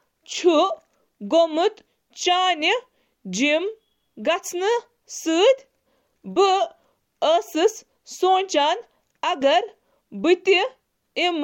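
No technical faults are audible.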